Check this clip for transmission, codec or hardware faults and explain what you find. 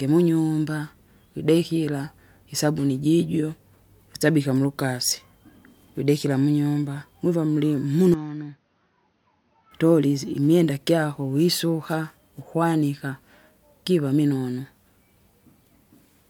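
One fault shows up. From 8.14 to 9.71 s the input likely switched to a poorer device: its narrower band cuts everything above 6.4 kHz, so the speech turns dull, drops about 10 dB and carries faint new background noise.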